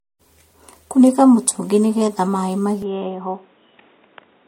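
From the start, the speech carries generation loss. It sounds swirly, smeared and hollow, and consonant attacks blur. It likely went through MP3 at 64 kbit/s about four times, each pass adding fresh quantisation noise and spectral holes. Nothing sounds above 16.5 kHz.

At 2.82 s, after "mũtũngi nĩgetha maĩ", the sound turns dull and boxy with no gap. This is likely an input switched to a poorer device. The band stops at 3.8 kHz. Level drops about 5 dB, and a new noise floor sits roughly 40 dB below the speech until the end.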